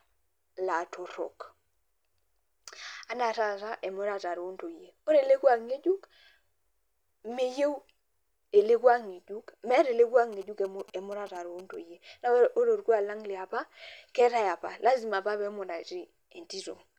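From 10.33 s to 11.75 s the speech picks up GSM signalling bursts: a galloping dit-dit-dit of short buzzes at 217 Hz, sitting well below the speech level. A 2G handset close to the recording chain was exchanging brief signalling bursts with its network rather than carrying a call. Somewhere in the audio circuit a junction rectified that radio energy, so each burst group became an audible envelope. That envelope pulses at the handset's 217 Hz frame rate.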